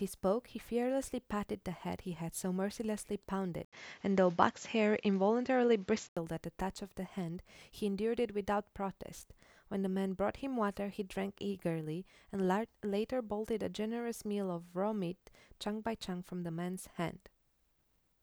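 Speech recording in which the sound changes character between 3.65 and 6.17 s. At 3.65 s there is a gap of 80 ms, after which the band is cut off at 7.6 kHz, the tone turns duller and boxier, the level shifts by around 5 dB and a different background noise sits roughly 35 dB under the signal. At 6.17 s the fuller sound returns. The likely cause is the input switched to a poorer device for that stretch and then back again.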